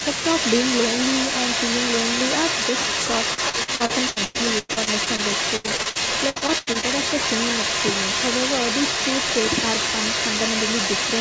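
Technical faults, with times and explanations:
Throughout, echo leak: a second copy of the speech trails the original by about 0.34 s and is roughly as loud as it. Likely a far-end loudspeaker whose echo canceller let its pickup through. On a spectrogram harmonic patterns appear twice, offset by 0.34 s.
3.34–5.20 s and 5.56–6.85 s, repeated packet loss (robotic sound): each stretch has 12 gaps, the longest about 104 ms and 85 ms. Extended last-sound fills cover roughly a third of each span, giving choppy speech with pieces missing. A spectrogram shows frozen, flattened harmonic stripes between abrupt breaks.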